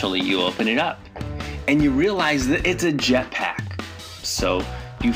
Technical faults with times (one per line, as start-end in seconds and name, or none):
0.00-5.16 imaging from linear upsampling